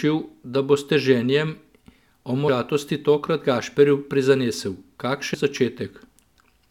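A speech recording in which, from 1.68 s to the end, just after "s 'teženjem'", sample clock jitter adds a fine hiss and roughness. The converter's clock is wandering, on the order of 2 microseconds, so samples land slightly early or late and the timing error becomes amplitude error wherever the waveform slopes steeply. The result sits roughly 40 dB below the signal. It differs from an ordinary noise floor because it swells on loud, bright consonants and disappears in the pauses. Compressed frames skipped cause two short jumps, at 2.47 s and 5.33 s, each dropping roughly 100 ms of audio. The decoder lost or rejected several whole frames, and the jump size fits a frame of about 21.3 ms. Unlike a dropout, nothing goes silent, and the speech simply lurches forward with a piece missing.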